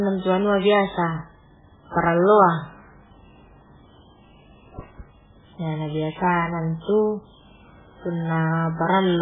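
Heavy MP3 compression is the likely cause, with the encoder starved of bits so badly that the result fits a rate around 8 kbps. Short of data, it cuts all treble at about 3.8 kHz and drops weak frequency lines that flicker in and out between frames. Throughout the speech, the sound is dull and muffled, with a watery, swirling texture, metallic chirping on s sounds, and consonant attacks smeared rather than crisp.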